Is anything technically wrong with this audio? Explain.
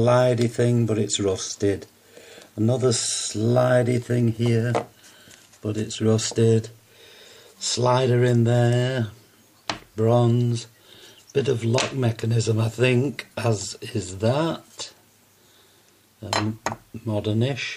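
No, the signal shows no technical faults anywhere in the clip.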